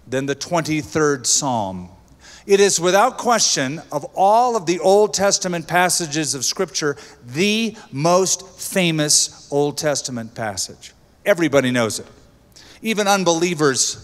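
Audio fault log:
No technical faults can be heard across the whole recording.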